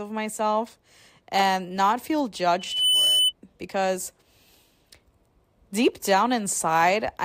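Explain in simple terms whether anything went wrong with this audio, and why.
From 2.59 to 3.33 s, after "myself and not feel", a shrill 3 kHz whistle swells: loudspeaker feedback squeal, the microphone re-amplifying its own speaker.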